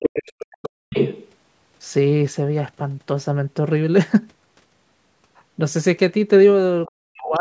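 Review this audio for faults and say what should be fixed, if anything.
Other side's voice leaking through, from 0.0 to 0.46 s, 0.63 to 0.7 s, 0.94 to 1.32 s, 6.86 to 6.91 s and 7.24 to 7.36 s: a second voice sits under the speech, at its loudest (about 5 dB below it) in the opening second and barely audible near 6.9 s. The likely cause is loudspeaker playback reaching the microphone that the echo canceller did not fully remove. Using a headset, or lowering speaker volume and giving the canceller time to converge, would prevent it.

Speech suppressed in double talk, from 0.4 to 0.95 s and 6.93 to 7.4 s: the speech dips sharply, by as much as 40 dB, while the other voice is present, roughly half a second each time. Here the canceller likely treated the overlap as echo and pulled everything down. A canceller with better double-talk detection, or a headset that removes the echo path, would stop these drops.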